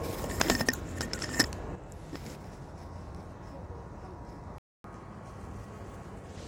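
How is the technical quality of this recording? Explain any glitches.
The technical quality is compromised by three faults, starting in the first half of the clip.

One channel drops out at 1.75 s and stays lost to the end. The level falls abruptly by about 6 dB, which is what happens when a stereo pair is summed to mono and one side is missing. Anything present only in that channel vanishes at the same moment, leaving a quieter sound. The cause is likely a lost stereo channel upstream of the mono fold-down.

A playback stall follows at 4.58 s, cutting the sound to silence for about 259 ms until 4.84 s. The gap lands mid-flow with no fade, so it reads as a hard dropout rather than a pause in the material. This is likely the player running out of buffered data, or its audio thread being blocked, before output resumes.

Catch-up at higher speed runs from 4.84 s to 6.36 s. The player works through its accumulated backlog by resampling at 1.15 times normal speed, so the audio runs faster and its pitch rises by roughly two semitones. 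The effect is a brief lift in pitch and tempo lasting about one and a half seconds. Having won back most of the lost time, speed and pitch settle back to normal just before the end.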